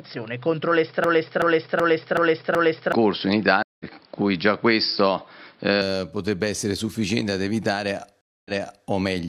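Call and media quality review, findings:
Input switched to a poorer device, 0.00–5.82 s: dull, boxy band ending at 5.4 kHz, added noise roughly 35 dB down, level about 5 dB different. Likely input path. Clears abruptly at 5.82 s with no gap, unlike a reconnect.

Broken-record loop, 1.04–2.92 s: the same 377 ms fragment repeated 5 times back to back, no silence between. Likely a stalled player or encoder buffer. Exact repeats and lost audio, not a resend after a dropout.

Stream reconnect, 3.63–3.85 s: 171 ms silence, then audio resumes roughly 200 ms later. Network or player. Stream reconnect, 8.21–8.87 s: 244 ms silence, resumes 418 ms earlier, so a short passage plays twice. A gap precedes each, unlike the loop.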